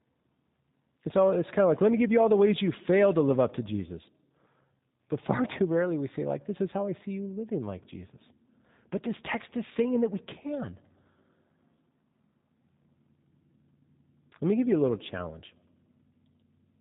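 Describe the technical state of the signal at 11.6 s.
At 11.6 s the signal is inside a switch to a distant microphone, running from 11.18 to 12.63 s, just after "saying that we can". The speech turns roomy and hollow with thinner bass, at little change in level, and faint room noise sits roughly 35 dB below the speech. The likely cause is a failed or dropped close microphone. Throughout, G.729 codec damage is plainly audible: the speech is rebuilt from a vocal tract filter, pitch predictor and sparse pulses, giving a rough, synthetic texture with nothing above 3.8 kHz, consistent with an 8 kbit/s stream.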